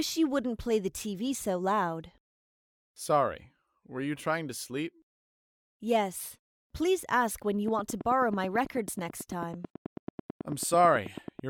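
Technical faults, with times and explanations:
7.68–11.49 s, train of clicks: a steady ticking at about 9 clicks per second starts here and runs to the end, each pulse much the same shape and peaking a little above the level of the sound itself, and it carries on through any gaps. Such an evenly spaced string of near-identical sharp pulses sitting on top of the audio is likely interference from nearby equipment or a faulty connection or power supply.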